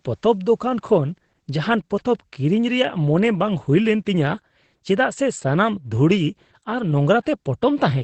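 From start to finish the speech carries plainly audible Opus voice compression. Nothing gets through above about 8.6 kHz, so it sounds muffled, and the linear-prediction coder's coarse excitation leaves a hoarse, slightly robotic edge, which fits a low rate near 12 kbps.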